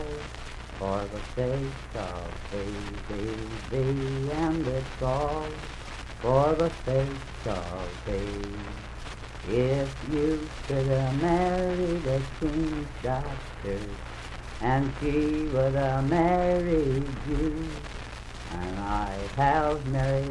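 No technical faults can be heard anywhere in this audio. There is nothing in it that needs a timestamp or a closer listen.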